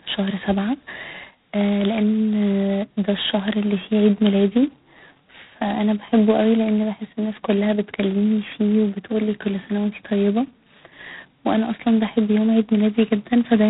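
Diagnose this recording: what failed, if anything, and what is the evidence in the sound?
Codec stage: heavy G.726 ADPCM damage throughout. Rasping hiss tracks the speech level, fitting two-bit 16 kbit/s coding; a spectrogram shows noise-filled bands ending sharply at 3.9 kHz.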